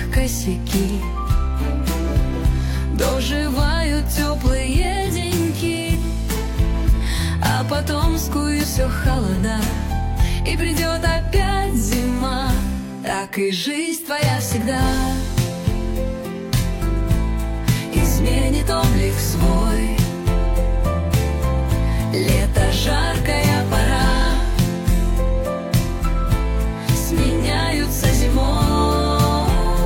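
At 5.91 s and again at 8.60 s, a brief chirp, squawk, click or short hole cuts through the sound, each lasting about 50 ms. This is damaged data in a compressed stream. Corrupted bytes garble the frames there. The decoder loses sync and hunts for the next valid frame.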